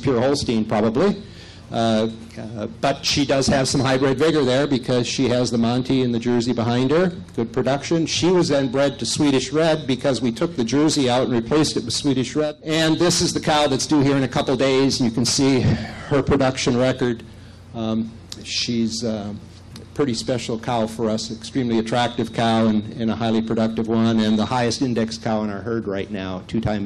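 No technical fault can be heard anywhere in the recording. There is no moment in the audio that needs to be marked.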